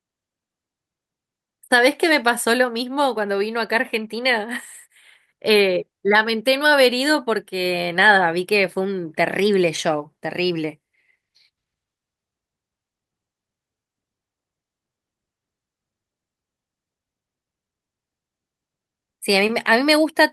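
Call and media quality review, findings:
Clock drift between sender and receiver, whole clip. Sender clock running fast, by around 4 percent. Receive jitter buffer keeps overfilling, so playout must shed audio to hold latency. Audible as speech pacing that never quite settles, with small recurring hitches rather than a single dropout.

Repeated timing corrections, 0.20 to 20.12 s. Receiver trimming short slices of speech to absorb the surplus from a sender running at 104 percent. All edits discard audio and are spaced unevenly.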